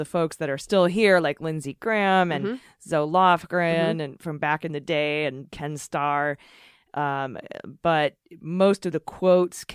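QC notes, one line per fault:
Nothing to flag here, the speech comes across without any technical trouble worth a note.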